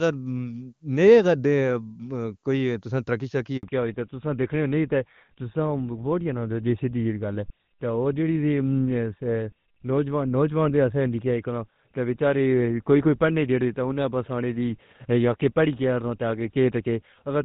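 At 3.57 s there is a handover gap of 60 ms: the call switches networks, no speech frames arrive during the transfer, and the voice dies away within a few tens of milliseconds to silence until the new link picks up at 3.63 s. Whatever was spoken in that interval is lost.

From 3.63 s to the end, a fallback to narrowband follows. The call leaves the AMR wideband (HD Voice) codec, whose clean delivery before the gap points to its top rate of about 23.85 kbit/s, for a codec consistent with GSM full rate at 13 kbit/s. Nothing above 4 kHz remains, so the speech turns duller and rougher.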